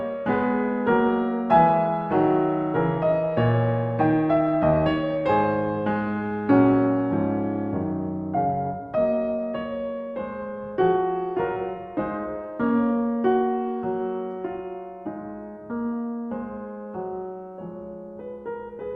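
Music, with nothing technically wrong to report.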